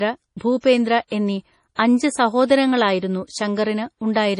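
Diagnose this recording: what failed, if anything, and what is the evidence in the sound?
The codec stage failed. The speech has no content above 10.5 kHz, so the treble ends at a hard ceiling. The sound is watery and swirly throughout, and the s sounds carry a metallic chirp. This is heavy MP3 compression, likely from a low bitrate, around 32 kbps. Starved of bits, the encoder cuts the top band and drops weak frequency lines. Those lines flicker on and off between frames.

Pre-echo comes from the same codec stage. A short hiss arrives just before sharp onsets at 0.37 s, 1.07 s and 1.75 s. It runs ahead of each attack by 36 ms, 42 ms and 35 ms. The attacks themselves sound soft and smeared. Each onset fell late in a transform block. The quantisation noise was sized for the loud attack. It spread across the whole block and filled the quiet gap before it.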